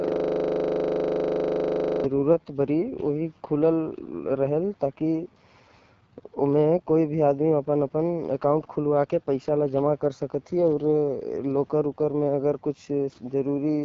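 From the very start until 2.04 s, a rapid, buzzing stutter repeats at 25 Hz. It is a system hang loop: the system had already frozen while the sound hardware kept replaying one 40 ms stretch of its buffer, about 50 times over.

Throughout the speech the sound is rough and raspy, with nothing above 7.4 kHz. This is the AMR wideband (HD Voice) codec at one of its lowest rates, which fits 8.85 kbit/s, where the pulse-driven vocal tract model cannot render the voice cleanly.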